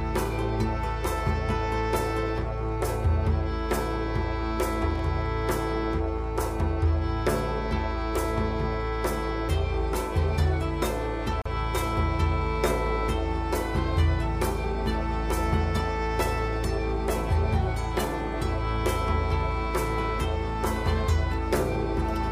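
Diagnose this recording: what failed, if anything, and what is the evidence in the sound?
Analogue wiring: a loose connector crackle runs from 4.90 to 5.03 s, an irregular burst of scratching lasting about 0.13 s. The pattern points to a worn or dirty contact shifting in its socket. As it moves, the connection makes and breaks many times in quick succession, chopping the signal into fragments.

Encoding or file assembly: at 11.42 s a gap at a join of encoded pieces opens, a silence of about 38 ms dropped into otherwise continuous sound, ending at 11.46 s. Its edges are smeared, and the sound resumes exactly where it broke off. That fits two separately encoded segments butted together without trimming. The encoder's start-up delay and the padded final frame were both left in the joined file.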